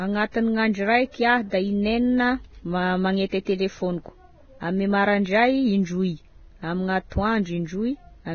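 Heavy Vorbis compression is the likely cause of the damage throughout this speech recording. The coder has discarded everything above 6.6 kHz and quantised the remaining treble so coarsely that detail turns to hiss and grain. Tones sound roughened and attacks blurred, which fits a bitrate near 17 kbps.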